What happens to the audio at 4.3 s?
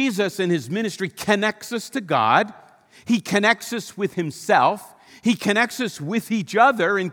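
Nothing goes wrong at 4.3 s; the speech carries on intact through that moment.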